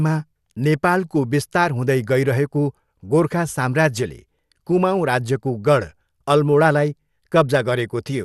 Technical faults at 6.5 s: MP2 compression

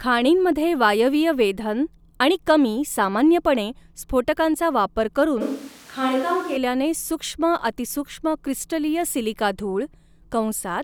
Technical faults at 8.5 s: none

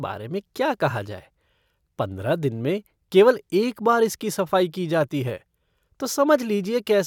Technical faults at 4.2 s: none

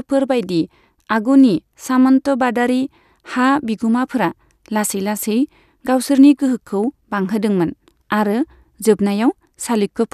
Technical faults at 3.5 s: none

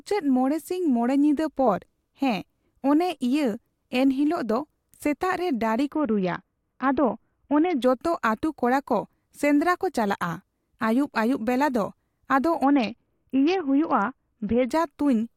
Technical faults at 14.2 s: Bluetooth SBC bit pool drop

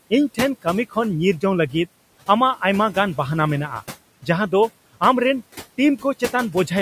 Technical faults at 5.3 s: noise suppressor artifacts

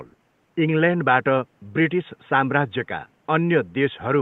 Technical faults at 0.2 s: none

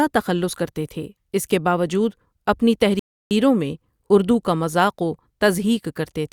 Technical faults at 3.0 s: rebuffering stall

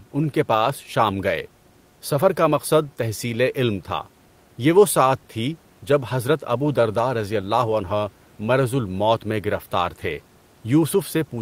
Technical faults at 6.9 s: none

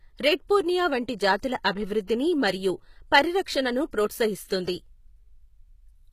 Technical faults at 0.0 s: HE-AAC compression

